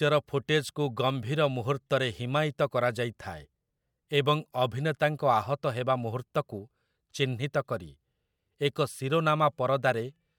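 No technical faults can be heard anywhere here.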